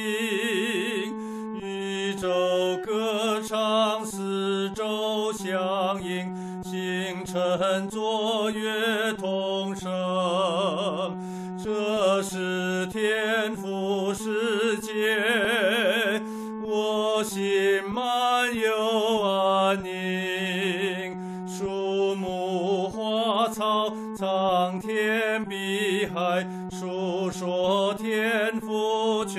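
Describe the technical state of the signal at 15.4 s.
At 15.45 s the sound jumps ahead, with no gap of silence. This is likely a dropped buffer (overrun): a few milliseconds of samples were overwritten before being read, and the audio on either side was joined directly.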